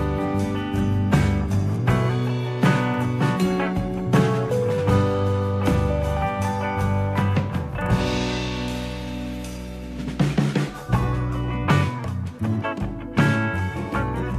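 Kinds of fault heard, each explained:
No fault can be heard in this audio; the signal stays continuous and stable throughout, with no dropouts, distortion, or level disturbances.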